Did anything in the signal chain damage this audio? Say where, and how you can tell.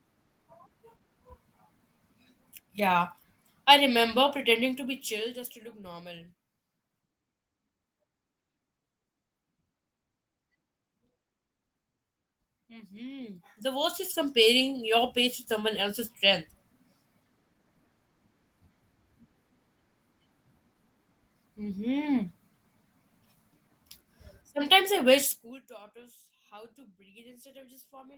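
No, nothing in this speech recording stood out on listening as damage from any stage of the signal chain.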